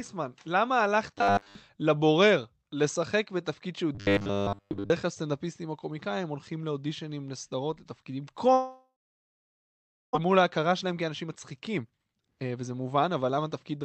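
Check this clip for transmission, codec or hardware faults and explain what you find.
Three kinds of fault are audible in this speech clip: robotic sound from repeated short buffers, a long network dropout, and a jitter buffer speed-up that follows it. The audio has passed through a call codec, and its high-frequency content stops at about 8 kHz, which fits Opus at around 32 kbps.

Robotic sound from repeated short buffers appears from 1.18 to 1.55 s and from 3.95 to 4.91 s. The speech turns into a stiff, metallic buzz locked at 100 Hz while still loosely tracking the syllables. The likely cause is audio arriving too late for playback, so the receiver repeats its last 10 ms block instead, skipping real audio. Most of the sound in these spans is repetition, and the 100 Hz pitch is one over that 10 ms block length.

The long network dropout runs from 8.53 to 10.17 s. The receiver first extends the last sound as a fading buzz or hiss, and the remaining 1.23 s is silence. 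About 1 s of audio is never played, so speech resumes further on with that portion missing. This points to a likely stall in packet delivery, with playback delay shifting by roughly 0.7 s.

The jitter buffer speed-up follows from 10.25 to 13.79 s. The speech plays at 117% speed with the pitch unchanged, and it sounds hurried. After the dropout the buffer holds more audio than its target, so the receiver trims short pitch-period-sized slices over and over, cutting roughly 0.7 s in total to bring the delay back down.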